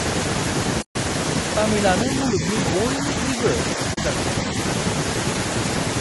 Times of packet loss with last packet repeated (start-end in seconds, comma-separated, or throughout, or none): none